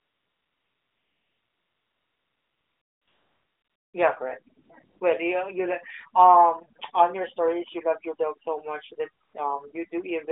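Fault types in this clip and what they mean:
AMR comfort noise: The phone judged nothing was being said, stopped sending speech frames, and the receiver filled in smooth synthetic noise. It covers the opening 3.9 s and brief gaps at 4.64, 4.84 and 9.24 s. A spectrogram shows flat, featureless noise patches with abrupt edges.
filter restarted on every block: A filter drops its memory at each block boundary, so every block starts with a small transient. From 8.06 s, after "your stories you love", a 43.1 Hz buzz follows the level, which fits a 1024-sample block. It shows as evenly spaced waveform clicks and vertical spectrogram stripes.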